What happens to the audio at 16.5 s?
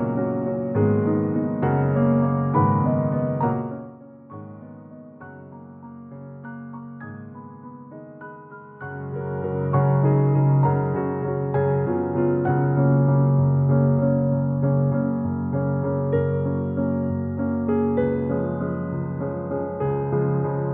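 Nothing goes wrong at 16.5 s; the audio is intact there.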